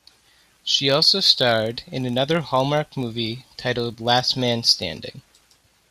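From start to finish the speech carries a low buzz at about 46.9 Hz, the signature of a filter restarted on every block. The filter discards its internal state at each block boundary and begins again from zero, so every block opens with a small transient. Repeating at that rate, which fits a 1024-sample block, the transients merge into a steady buzz whose loudness rises and falls with the level of the speech.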